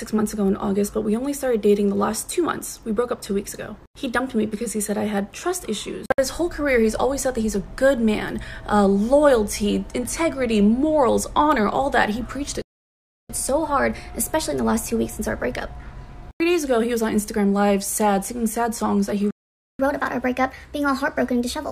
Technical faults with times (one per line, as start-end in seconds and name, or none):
12.62-13.30 playback stall
13.30-16.30 catch-up at higher speed
19.31-19.79 playback stall
19.79-21.71 catch-up at higher speed